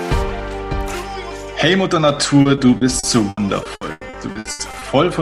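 From 2.41 to 4.83 s, repeated packet loss (robotic sound) sets in: over a dozen short gaps, the longest 100 ms, are patched by stretching the preceding sound, about 0.66 s in all, roughly a quarter of the span. The result is choppy, robotic audio with pieces missing.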